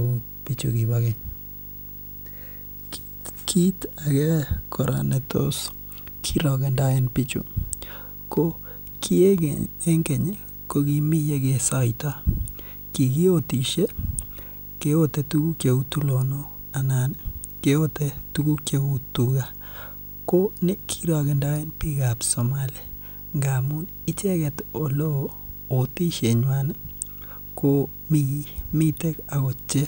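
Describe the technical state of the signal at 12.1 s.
At 12.1 s the speech carries video or display buzz, present throughout the clip. A screen or video cable is coupling into the audio. It gives a 50 Hz buzz with hash above it and a 15.6 kHz line whine, well below the speech.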